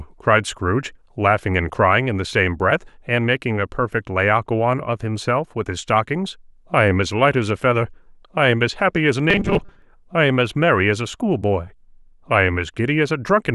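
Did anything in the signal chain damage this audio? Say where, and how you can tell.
Yes. Robotic sound from repeated short buffers appears at 9.30 to 9.82 s in this speech. For about half a second the voice turns into a rigid, metallic buzz at 200 Hz that still loosely tracks the words. The likely cause is at the driver or buffer stage. Fresh audio arrived too slowly, so the software looped the most recent 5 ms block to fill the gap and skipped the real signal. About half the material was repeated, and that 5 ms loop sets the fixed 200 Hz pitch.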